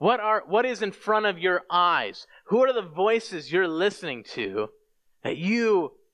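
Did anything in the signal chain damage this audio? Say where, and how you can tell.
No, nothing in the signal chain stood out as damaging this speech recording when I listened to it.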